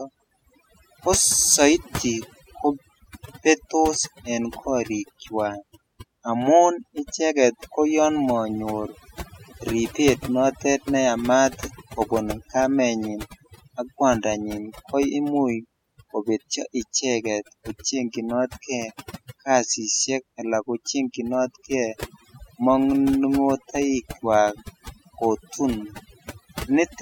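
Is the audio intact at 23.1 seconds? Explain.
No. Overdone noise removal runs through the whole clip, including 23.1 s: bands near the noise estimate are cut away, leaving twinkling specks.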